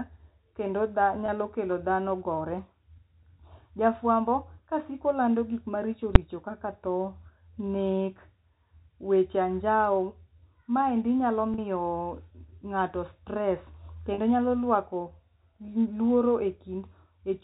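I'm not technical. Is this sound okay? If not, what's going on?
No, this speech recording has two kinds of problems.

Packet loss with pitch repetition happens three times: at 1.26 to 1.28 seconds, 11.54 to 11.58 seconds, and 14.14 to 14.18 seconds. Small pieces of the sound got lost in transit, and the receiving end filled each gap by repeating the last bit of voice. That is why you hear a brief, slightly buzzy held tone rather than a hole of silence. The first loss is about 20 ms, the other two about 40 ms.

Invalid numbers at full scale happen once, at 6.15 seconds. A calculation went wrong and produced impossible values, so the audio jumped to a flat extreme value far beyond the speech's peaks for a tiny block of about 6 ms. Because that block is so short, it comes across as one sudden bang, not a pop at the start and end with silence between. Unlike a repair click, it is abrupt and harsh rather than smoothed over.

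The narrow, telephone-like tone comes from standard G.711 telephone coding and is not a fault.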